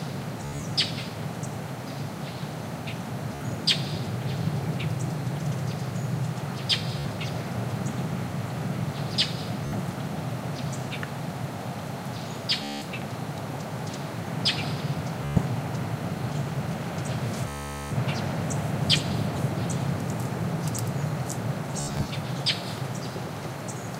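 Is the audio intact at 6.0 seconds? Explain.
Yes, the audio is intact at 6.0 seconds, with no audible fault at that moment.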